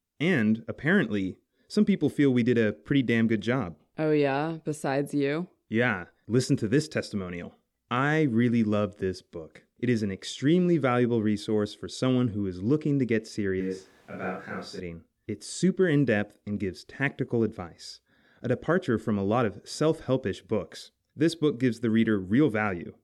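From 13.61 to 14.80 s the speech suddenly turns roomy and hollow, thinner in the bass, with background noise sitting only about 25 dB under it, then snaps back. That's likely a switch to a distant microphone after the close one dropped out, though the level hardly changes.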